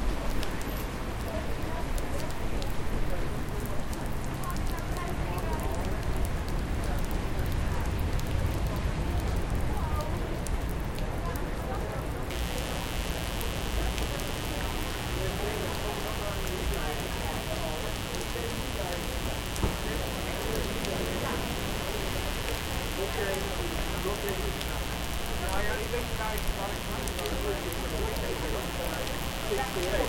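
A switching source such as a dimmer or rectifier, or a missing shield, lets sharp spikes from the 60 Hz mains into the signal from 12.30 s to the end. This is mains buzz: a steady, raspy drone, fairly loud against the sound, with harmonics reaching into the kilohertz range.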